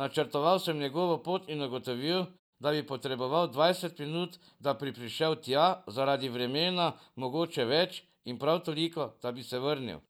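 Nothing in the speech stood out as a technical fault on listening.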